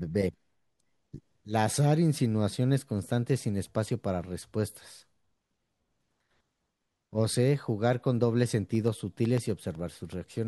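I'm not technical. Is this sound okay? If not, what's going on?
No. From 8.75 to 10.38 s there are periodic USB or driver dropouts: a steady run of tiny ticks, one every 0.125 s, or eight per second, about fifteen in all. Something on the computer is briefly interrupting the connection to the audio device at a fixed rhythm, and each time a sliver of the speech, roughly half a millisecond, is lost and replaced by silence. Those small gaps are what you hear as the regular ticking.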